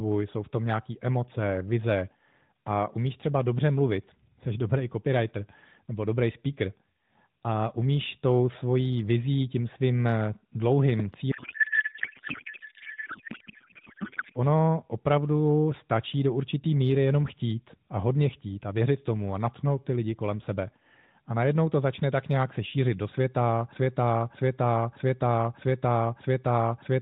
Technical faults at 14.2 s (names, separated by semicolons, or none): codec payload misread